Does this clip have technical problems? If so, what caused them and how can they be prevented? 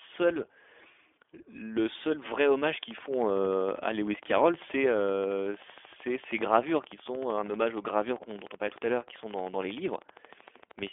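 Yes. Throughout, the speech carries the iLBC codec's damage: nothing above about 3.7 kHz, a slightly rough, synthetic texture, and framing that fits 20 ms frames at 15.2 kbps. Unlike plain band-limiting, the roughness sits inside the band too. Use a wideband codec instead.

From 2.67 s to 10.88 s a train of clicks ticks over everything, including pauses, at a regular 12.9 per second, about a hundred similar-shaped pulses, roughly as loud as the speech. Their steady spacing and sameness, unlike random crackle, likely point to electrical interference or a faulty connection. Shield cabling and check the interface connection.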